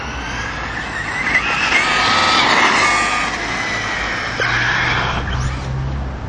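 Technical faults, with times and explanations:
Throughout: MP3 compression. The encoder was likely starved of bits, and the damage is plainly audible, in keeping with a rate around 64 kbps. Faint frequency components drop in and out from one short block to the next. That flickering gives a watery, swirling texture, metallic chirps on bright, hissy detail, and blurred attacks where sharp onsets get smeared.
2.18 to 2.29 s: repeated frames. A short stretch of compressed data, about 52 ms long and consistent with two MP3 frames, was delivered again and decoded twice more, so the same sliver of sound plays three times in a row. This produces a quick stutter. The clip runs about 104 ms longer than it should, and everything after this point arrives correspondingly late.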